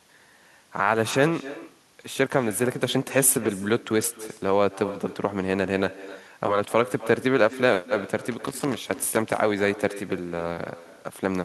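From the start and all the way through, each stretch of speech is trailed by a fainter, thinner copy arriving roughly a third of a second later, sitting about 16 dB below the direct voice. This is echo with no canceller. The far end is playing the call through a loudspeaker, and its microphone is catching that playback and sending it straight back. Because nothing on that side subtracts the returned signal, the speech comes home after the network round trip as a delayed shadow.

From 8.31 s to 9.37 s, an irregular burst of scratchy crackle breaks over the audio for about a second. This is loose connector crackle. A worn or dirty contact somewhere in the chain is intermittently making and losing connection as it shifts, chopping the signal many times in quick succession. Any DC present on the line turns each break and reconnection into a click, which together form the rough, uneven crackle.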